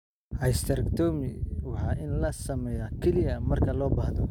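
CD scratch ticks, 0.50 to 0.93 s: four brief clicks, the longest around a millisecond, recur once per disc rotation where a scratch defeats error correction and samples get patched.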